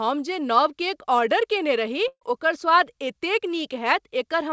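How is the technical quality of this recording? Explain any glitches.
The speech comes over a call link with nothing above 8 kHz, which fits a wideband codec such as G.722, and it has one glitch. From 2.08 to 2.23 s, after "कयने रही", the last sound is held and fades, goes silent for about 50 ms, then resumes at "ओकर स्वाद एतेक". This is a burst of packet loss: about 140 ms of audio never arrived, so the receiver stretched out and faded the last sound, then skipped ahead.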